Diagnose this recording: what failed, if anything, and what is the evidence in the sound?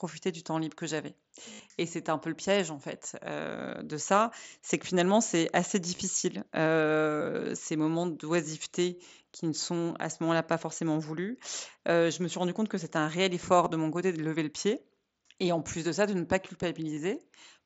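Concealed Bluetooth headset packet loss on the headset radio link. After "temps libre que j'avais" at 1.53 s, 60 ms is filled with a buzzy, held tone. Brief 22.5 ms patches follow at 5.97 s, 13.64–13.70 s (scattered) and 16.95 s. The receiver bridges each gap by repeating recent waveform.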